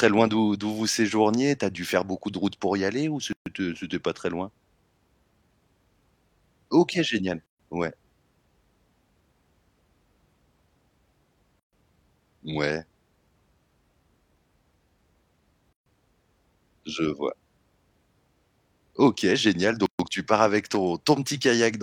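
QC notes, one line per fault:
3.33, 7.46, 11.60, 15.73 and 19.86 s (first after "pour y aller ou", last before "tu pars avec"): gap at a join of encoded pieces. Silences of about 133 to 136 ms recur every 4.0 s with abrupt, smeared edges. Separately encoded segments were joined without trimming encoder delay and final-frame padding.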